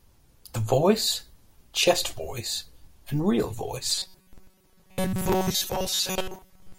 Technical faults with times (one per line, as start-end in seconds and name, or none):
3.90-6.79 robotic sound from repeated short buffers